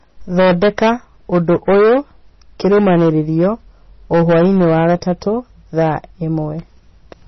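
MP3 compression runs through the whole recording: the speech sounds watery and swirly, with nothing above 5.9 kHz. This is likely a low-bitrate MP3 encode, around 24 kbps, where the encoder drops the treble and lets weak frequency lines flicker between frames.

Hard clipping occurs at 0.37–0.93 s, 1.33–1.99 s, 2.65–3.47 s, 4.13–5.12 s and 5.78–5.96 s. The signal exceeds what a stage can pass by about 5 to 13 dB, so peaks are sliced flat, adding a harsh fuzz to the loud passages.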